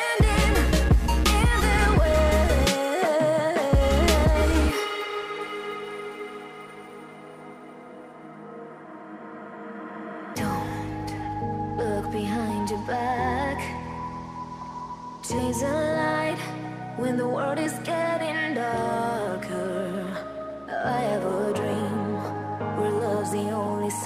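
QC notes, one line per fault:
4.40 s, 15.38 s and 17.65 s, compressed frames skipped: whole frames of the compressed stream never reached the output, either missing or rejected by the decoder as damaged, so playback jumps forward. The first two jumps lose about 70 ms, about three 26.1 ms frames, and the one at 17.65 s loses about 30 ms, a single frame.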